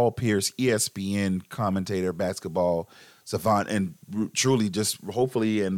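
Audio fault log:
No audible faults anywhere in this speech recording.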